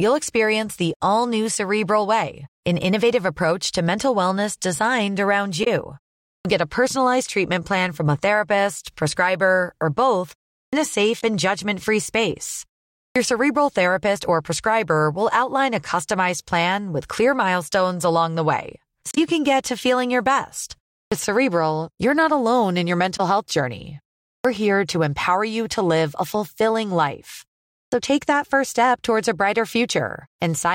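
At 5.63 to 5.68 s, a short glitch cuts through the speech. This is damaged data in a compressed stream. Bytes in the stream were wrong. The decoder misread the frames, lost sync and hunted for the next frame header. The same glitch returns at 11.20 to 11.23 s, 19.11 to 19.18 s and 23.16 to 23.20 s. Each one is a brief blip. The longest lasts about 70 ms.

At 6.38 to 6.45 s comes a clipped start after a pause. The silence before it lasts 0.41 s. The output device dozed off and needed time to wake. About 70 ms of sound was swallowed, so the next word begins abruptly, missing its opening. It happens again at 10.66 to 10.73 s, 13.08 to 13.16 s, 21.05 to 21.12 s, 24.37 to 24.45 s and 27.85 to 27.92 s. Each follows a gap of 0.32 to 0.45 s and loses 66 to 76 ms.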